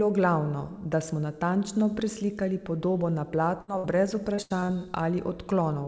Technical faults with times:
3.62-3.86 burst of packet loss
4.36-4.96 repeated packet loss (robotic sound)

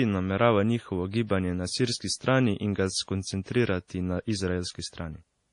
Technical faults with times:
0.00-5.52 transcoding between lossy codecs

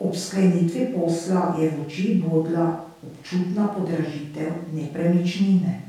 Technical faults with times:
none

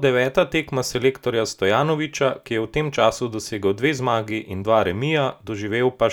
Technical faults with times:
none

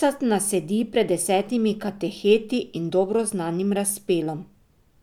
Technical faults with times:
none

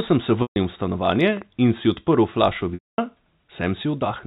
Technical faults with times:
0.42-0.56 packet loss with pitch repetition
1.05-2.14 train of clicks
2.74-2.98 packet loss with pitch repetition

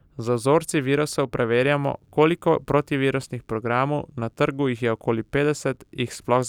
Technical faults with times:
none

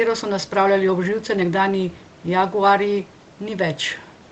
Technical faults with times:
none

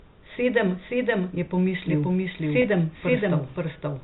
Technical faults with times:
0.00-4.03 doubled audio track
2.62-2.64 packet loss with pitch repetition

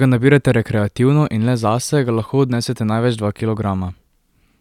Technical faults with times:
none

